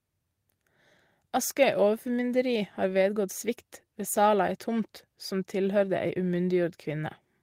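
No technical faults can be heard anywhere in the recording. The speech runs without any audible interruption or disturbance.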